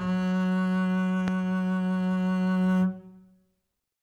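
A loud pop hits at 1.28 to 1.30 s, a single sharp crack that stands well above the music, somewhere around 15 dB louder, while the playing carries on beneath it without a break. The most likely cause is a sudden voltage step or spike, as from a plug being seated, a switch, a static discharge or a driver glitch, entering the signal path, where the following circuitry rounds it into a brief thump.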